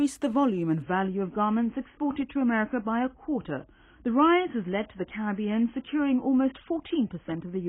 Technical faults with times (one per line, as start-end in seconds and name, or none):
0.82-7.69 adaptive stream at a lower bitrate